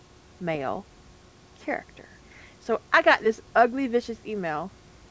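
No technical faults can be heard in this speech clip.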